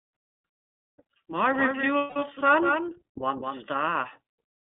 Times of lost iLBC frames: 1.98-2.22

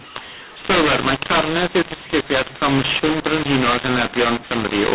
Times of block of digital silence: none

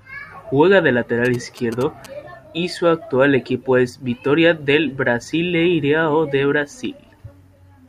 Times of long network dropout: none

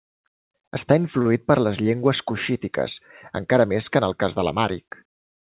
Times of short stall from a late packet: 1.22-1.27

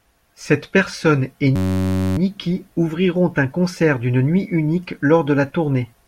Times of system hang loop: 1.56-2.18

